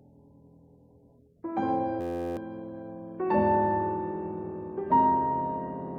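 From 2.01 to 2.37 s there is a system hang loop. The system stalled while the hardware kept replaying one 11.61 ms slice, which fits a 512-sample buffer. It repeats at 86.1 Hz as a steady buzz. About 0.4 s of audio is lost.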